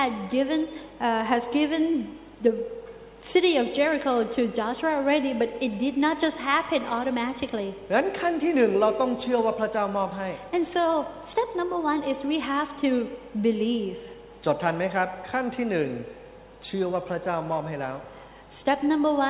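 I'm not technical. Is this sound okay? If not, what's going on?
Yes, the audio is technically sound, with nothing going wrong in the signal at any point.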